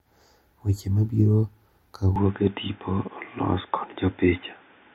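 At 2.16 s the speech suddenly goes dull and boxy and stays that way to the end. From there nothing gets through above about 3.6 kHz, and a faint new background noise sits well below the speech. There's no gap at the changeover and the level barely moves, just the tone. That points to the input being switched to a poorer device, likely a different mic or a headset's call profile with a narrower band.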